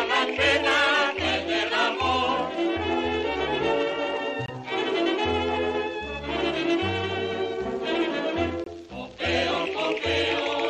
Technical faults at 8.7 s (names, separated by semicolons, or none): Bluetooth dropout